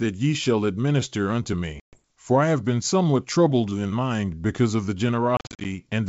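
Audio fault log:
1.80–2.03 s and 5.37–5.66 s, packet loss on an ADPCM call: first 130 ms of hard-edged silence, then 180 ms lost in gaps of up to 40 ms across 280 ms. The decoder's predictor loses sync, so sound resumes with brief distortion. These show as flat-line holes and vertical spectrogram streaks.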